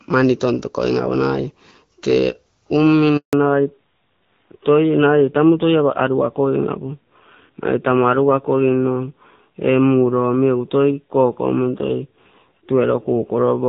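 At 3.17 s a handover gap opens: the call is passed from one network link to another, and no speech frames arrive while the switch completes. The speech dies away almost at once and stays silent for 160 ms, until 3.33 s, when the new link begins carrying audio. Whatever was said in that interval is simply missing.

From 3.33 s to the end, the call suffers a fallback to narrowband. After the handover the connection drops from HD Voice to an older narrowband codec, and everything above 4 kHz disappears. Before the gap, the wideband coding is clear with only light codec damage, consistent with AMR-WB at 12.65 kbit/s. Afterwards the speech becomes duller, boxier and rougher, a coarseness that fits AMR-NB at 7.4 kbit/s.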